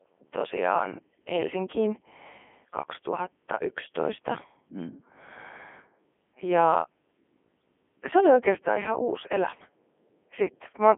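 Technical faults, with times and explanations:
Throughout, Codec 2 vocoder. The speech is rebuilt from sine waves, so it sounds robotic and buzzy. Nothing is above 3.6 kHz, which fits the 300 to 3400 Hz line band; the rate is 3.2 kbit/s.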